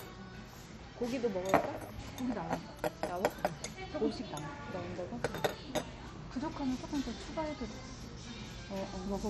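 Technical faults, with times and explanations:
Throughout, MP2 compression: the audio is dull, with nothing above 14.4 kHz, and carries a heavy gurgling, granular distortion as upper bands drop in and out from moment to moment. This is likely from MPEG Layer II coding at a very low bitrate, with the damage fitting something near 56 kbps. Too few bits across the 32 sub-bands forces the top bands off entirely, while the surviving bands are quantised so coarsely that their noise becomes audible.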